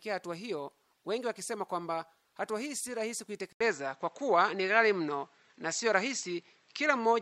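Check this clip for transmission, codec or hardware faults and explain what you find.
One fault is present. At 3.53 s the sound drops out for 80 ms and then continues to the end with a different character, which points to the input having likely been switched to a poorer device. After the gap, nothing is passed above 7.8 kHz, so the top end turns dull and boxy. The level shifts by about 5 dB, and a new background noise floor appears roughly 45 dB below the signal. The second device's narrower band, tone and self-noise produce this change.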